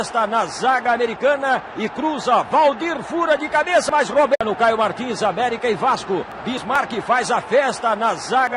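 Nothing is technically wrong with this audio.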